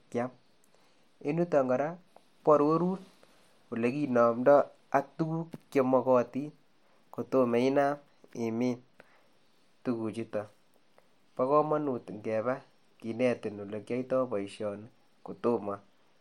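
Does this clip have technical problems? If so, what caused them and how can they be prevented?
No, nothing in this speech recording points to a technical fault, so there is no cause to trace and nothing to prevent.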